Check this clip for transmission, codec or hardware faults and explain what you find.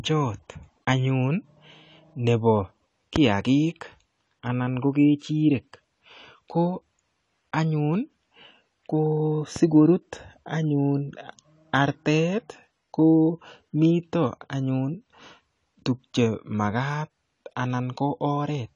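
The speech sounds dull and smeared from start to finish, with nothing above 11.5 kHz and a plainly audible warbling, fizzy texture on sustained sounds and sibilants. That points to AAC compression, likely AAC-LC at a low rate, which fits about 32 kbps. At that rate the encoder quantises each frame's frequency lines coarsely against its hearing model, lowering the top cut-off and leaving or noise-filling gaps in the spectrum, which produces the swirling artefacts.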